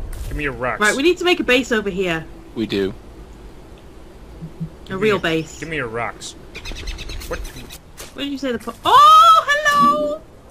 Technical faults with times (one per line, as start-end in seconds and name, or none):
none